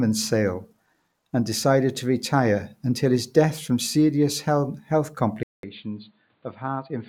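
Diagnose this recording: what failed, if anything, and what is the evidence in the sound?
After "death from serious health", there's a 200 ms gap at 5.43 s, then nothing above 4.6 kHz and about 10 dB less level. Likely an input switched to a poorer device at the driver.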